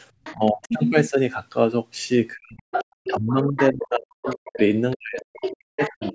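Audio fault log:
0.24–0.68 s, 2.72–3.72 s, 4.25–6.13 s: other side's voice leaking through. A second voice sits under the speech, faint in the first stretch (around 20 dB down), nearly as loud as the talker at 2.72–3.72 s (about 5 dB down) and about 10 dB down in the last. The likely cause is that the far end played over a loudspeaker and the echo canceller left part of that pickup in the microphone signal.
0.34–0.74 s, 2.35–4.59 s, 4.96–6.15 s: speech suppressed in double talk. The talker's level drops while the leaked voice is present, by roughly 25 dB in the first dip and roughly 40 dB in the two later ones. About 1.5 s of the middle span and about a second of the final span are pulled down, so the speech fades and breaks up. This likely comes from the canceller failing to separate near and far talkers and attenuating both together.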